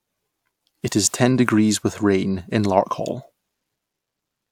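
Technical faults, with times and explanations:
No technical faults detected.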